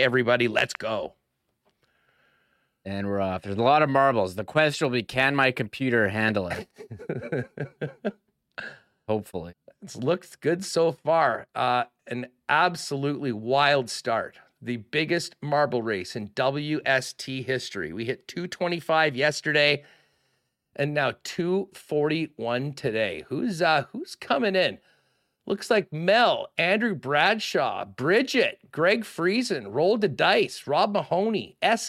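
No technical faults can be heard anywhere in the recording; the speech signal stays continuous and stable throughout.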